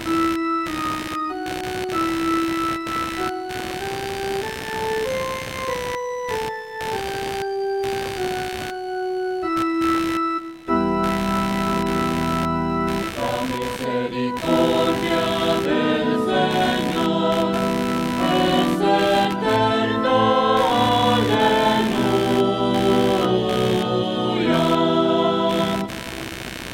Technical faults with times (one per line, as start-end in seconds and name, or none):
0.00-26.74 computer activity noise